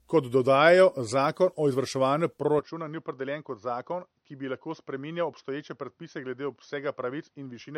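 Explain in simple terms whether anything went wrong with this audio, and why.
Yes, two things went wrong. Throughout, the speech sounds swirly, smeared and hollow, with the starts of sounds blurred. That is generation loss: the audio was likely compressed as an MP3 and re-saved about seven times, and each pass added more damage.

From 2.59 s to the end, the voice suddenly turns duller and boxier, loses its crisp top above about 6.2 kHz, gets a little quieter and picks up a faint new background hiss. This is likely an input switched to a poorer device partway through the recording.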